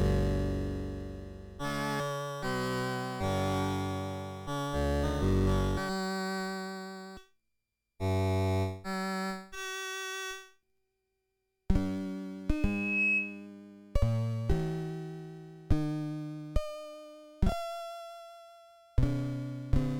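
At 12.50 s a loudspeaker feedback squeal starts, a single tone at 2.6 kHz. It swells over about half a second and peaks at roughly 5 dB above the sound, then stops at 13.47 s. The microphone was picking up its own loudspeaker, and at this pitch the loop gain exceeded one.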